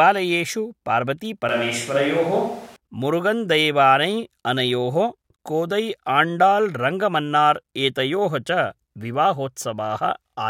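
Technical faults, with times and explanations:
1.49 to 2.76 s, switch to a distant microphone: the speech suddenly turns hollow and roomy, with thinner bass. Loudness stays about the same. Room noise rises to roughly 25 dB below the speech. The close sound snaps back at 2.76 s, likely after the close microphone dropped out.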